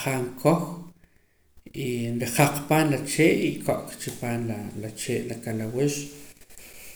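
Nothing in this recording trips any alarm, since no technical fault turns up anywhere along its run.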